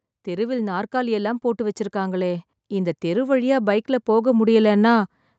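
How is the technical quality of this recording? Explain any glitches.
The recording's main flaw is a level that keeps climbing. From 0.24 s to the end of the speech, the automatic gain rises. The gain control judged the incoming signal too quiet and kept turning its gain up step by step instead of settling. Because the boost applies to everything, the voice and the background noise swell together, growing steadily louder across the clip. The audio's upper limit sits at about 8 kHz, which points to the call path's Opus coding at around 32 kbps.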